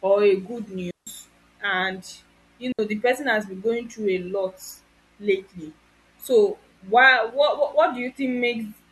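Digital wireless dropouts at 0.91–1.07 s, just after "or a good", and 2.72–2.79 s, before "the person has been": the receiver lost too much data and muted, leaving clean, near-silent holes of 162 and 67 ms with no noise burst around them.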